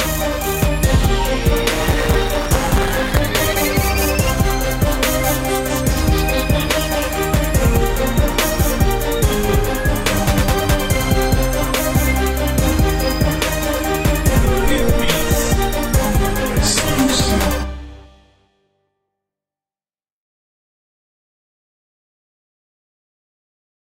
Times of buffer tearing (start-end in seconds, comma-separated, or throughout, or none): 1.70-3.19